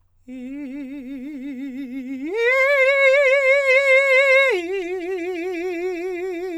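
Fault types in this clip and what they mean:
No faults detected: the music runs its full length without any audible defect to report.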